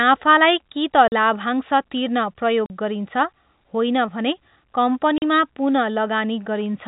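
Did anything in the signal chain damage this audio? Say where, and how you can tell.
Yes, at the network stage: packet loss filled with silence. The speech drops out for 40 ms at 1.08, 2.66 and 5.18 s, which fits two 20 ms packets each time. The gaps are dead silent with hard edges, not the smeared repetition of concealment, over a narrowband G.711 telephone band.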